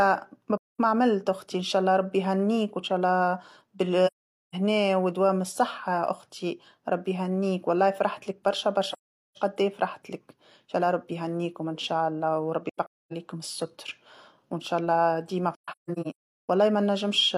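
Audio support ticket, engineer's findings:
AAC frame loss with muting in the speech, five soft-edged silent holes: 0.57–0.78 s, 4.06–4.54 s, 8.92–9.37 s, 12.69–13.13 s (broken gaps, longest around 0.3 s), 15.54–16.49 s (scattered, longest around 0.4 s). The decoder zeroes the lost spectra and the overlap windows fade the edges. Gap lengths fit whole frames of about 43 ms. Spectrogram shows full-band blank columns with tapered edges. Waveform shows flat gaps with short ramps.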